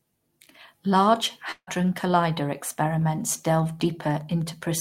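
At 1.51 s the speech cuts out until 1.69 s. The last sound is stretched into a fading buzz for about 157 ms, then goes briefly silent for about 60 ms, and resumes with roughly 160 ms of material gone. This is likely a long network dropout with concealment filling the gap.

From 3.57 s to the end of the clip there is Wi-Fi interference: a steady ticking repeating every 102.4 ms, roughly ten times a second, sitting well below the speech at around 35 dB down. It comes from a nearby radio's beacon bursts being rectified into the audio circuit.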